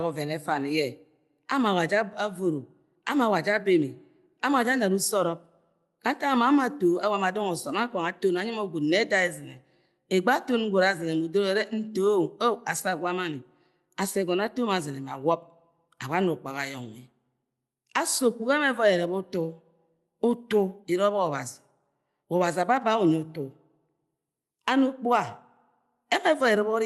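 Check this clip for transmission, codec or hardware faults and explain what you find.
No transmission, codec or hardware faults can be heard in this speech clip. It has the sound of a working call path, with the high frequencies rolling off around 12 kHz as an Opus-coded connection at about 40 kbps would give.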